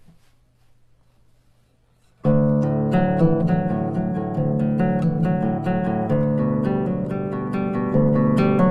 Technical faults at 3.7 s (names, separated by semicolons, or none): adaptive stream starting at a low bitrate